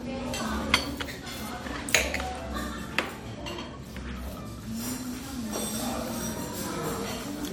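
An everyday sound recording with generation loss throughout: swirly, smeared and hollow, attacks blurred, worse than one encode at around 96 kbit/s would give. The likely cause is roughly four passes through AAC-LC, each requantising on a shifted frame grid. A spectrogram would show accumulated holes and smeared transients, with nothing above 20.1 kHz.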